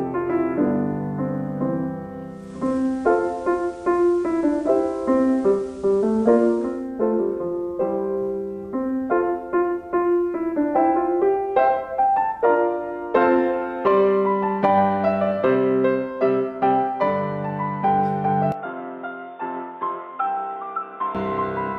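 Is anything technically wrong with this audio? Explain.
Yes, two faults can be heard.

From 2.22 to 6.96 s there is digital radio blending to analogue. The receiver lost the digital stream and cross-faded over about 0.46 s to the FM broadcast, then returned. Hiss rises to roughly 35 dB below the signal, and the level shifts by about 2 dB. On a spectrogram, a faint broadband noise floor fills in.

From 18.52 to 21.15 s the sound turns narrow and boxy with no gap at the change, most likely because the input switched to a poorer device. The band narrows, and the level drops by around 10 dB. New background noise sits roughly 30 dB down. The waveform visibly shrinks, and the spectrogram shows a hard ceiling.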